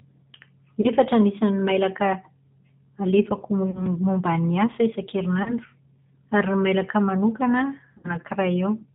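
Throughout, the speech carries plainly audible G.729 codec damage: a rough, slightly synthetic quality and nothing above 4 kHz. At 8 kbit/s, the voice is rebuilt from a vocal tract filter plus sparse pulses, unlike the smeared, swirly artefacts of transform codecs such as MP3.

VoIP packet loss concealed by the speech codec then occurs at 0.81–0.88 s, 3.71–3.86 s, 5.43–5.54 s and 7.98–8.16 s. Each of the first three replaces about 30 ms of sound, which fits one lost packet, and the last replaces about 60 ms. At each, the decoder stretches its last pitch and filter into a fading buzzy tone or coloured noise. Because each frame builds on the previous one, the voice stays weak or distorted after audio resumes. There is no silent gap or click, as a plain dropout would have.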